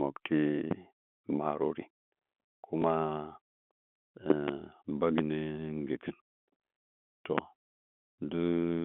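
Loud pops at 0.71–0.74 s, 4.30–4.51 s (a pair in quick succession), 5.18–5.21 s and 7.38–7.41 s stand roughly 15 dB above the speech. They are likely voltage pulses from a switch or static. The speech carries on unbroken beneath each thump.

At 2.82–2.84 s, packet loss with the last packet repeated fills one lost 20 ms packet with a replay of the previous one. Unlike the pops, nothing is added on top: the speech itself gives a small blip.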